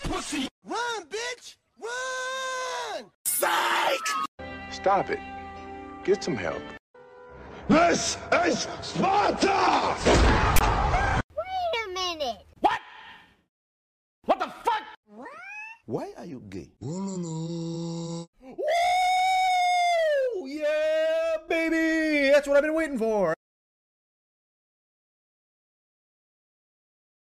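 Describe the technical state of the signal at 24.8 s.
Around 24.8 s the signal is intact, with no dropout, distortion or other technical fault audible at that point.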